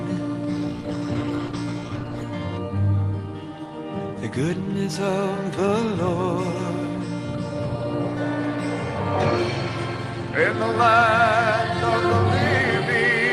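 From 0.55 to 2.35 s the sound turns rough and muffled: a call bitrate drop, consistent with the encoder falling from 40 to 14 kbps.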